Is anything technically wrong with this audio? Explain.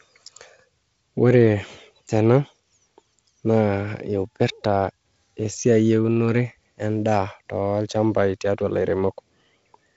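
No, nothing's wrong here; it's just speech coming over G.722 wideband telephone coding, with the light extra hiss of what sounds like the 48 kbit/s mode and nothing above about 7.7 kHz, which is how that link is meant to sound.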